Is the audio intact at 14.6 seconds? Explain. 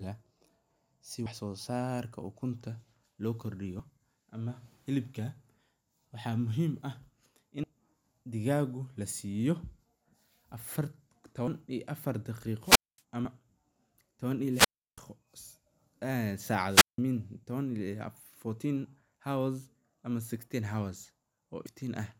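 No. From 14.51 to 15.00 s the speech hits a wireless microphone squelch dropout: the FM radio link fades, hiss swells, then the receiver's squelch mutes output for about 333 ms. Waveform and spectrogram show broadband noise, then a flat, empty gap before speech resumes.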